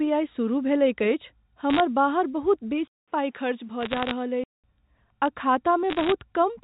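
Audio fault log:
1.7–1.8 s, 3.81–4.11 s and 5.9–6.12 s: bit errors on a digital phone line. Between "सुरुह भेलैक अछि" and "बाहर बहुत", then twice more, a spatter of sharp ticks sits on top of otherwise unchanged speech. Each tick is a single corrupted 8-bit G.711 sample. Flips in the sign or top bits throw that one sample far off, at an error rate of under one percent. Unlike dropouts, nothing goes missing. Unlike the codec's faint level-following hiss, these are isolated clicks.
2.88–4.64 s: input switched to a poorer device. After "बाहर बहुत" there is a silence of about 200 ms, and then the sound returns duller and boxier, about 5 dB quieter, with nothing above 3.8 kHz. It also carries its own new background noise, roughly 40 dB down. The likely cause is the system changing microphones or moving to a headset call profile. The gap and the different noise floor and level mark a change of hardware rather than a filter applied to the same signal.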